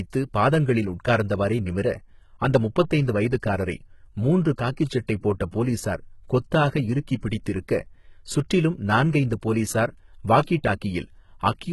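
The whole clip has that heavy, low-bitrate sound, most likely HE-AAC compression at something around 16 kbps. The treble is rebuilt from copied lower bands rather than coded, so s sounds come out gritty and a bit metallic, and there's nothing at all above 11.8 kHz.

Pre-echo shows up at 5.07 s and again at 5.51 s, each spread over about 15 ms, then once more from 10.44 to 10.47 s across 28 ms. In each case a sharp attack sat late in a transform block, so quantisation noise sized for the loud part leaked into the quiet just before it. You hear a brief hiss ahead of the onset, and the attack itself sounds softened and smeared.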